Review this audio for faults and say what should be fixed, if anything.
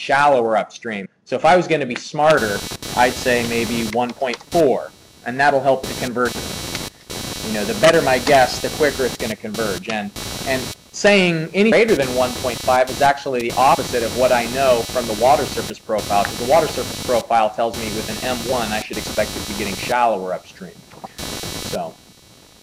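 Damaged data in a compressed stream gives short blips at 1.04 to 1.06 s, 6.27, 11.71, 13.74 and 18.52 s, where the decoder hits bad frames and resyncs. Check file integrity or the transfer path.

Computer activity noise, a buzzy pulsing at around 300 Hz only roughly 10 dB under the sound, runs from 2.4 s to the end as processor load shifts the shared ground. Isolate the audio ground or use an external interface.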